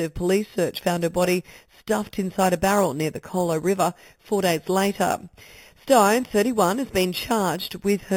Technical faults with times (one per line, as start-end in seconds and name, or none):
0.00-8.16 imaging from sample-and-hold upsampling